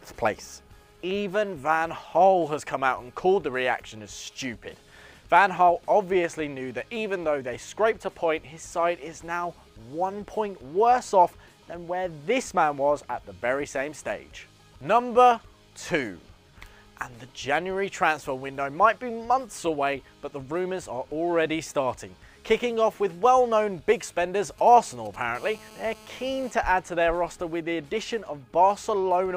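From 24.44 to 25.16 s there are GSM signalling bursts: a nearby 2G phone sends brief groups of radio bursts while signalling, and the audio circuit rectifies them. The result is a galloping dit-dit-dit of short 217 Hz buzzes, roughly 25 dB below the signal.

From 25.35 to 26.51 s there is continuous GSM phone buzz, consistent with a nearby phone carrying a call and transmitting bursts 217 times a second. The rectified pulses produce a steady, hard, raspy 217 Hz buzz rich in harmonics, unrelated to the wanted sound and sitting about 24 dB below it.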